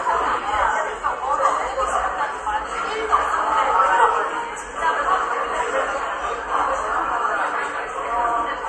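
From start to finish the audio carries plainly audible MP3 compression damage, likely from a low-bitrate encode near 48 kbps. Nothing sounds above about 11.3 kHz, and unlike a plain low-pass filter, faint detail swirls and warbles as weak frequency lines drop in and out.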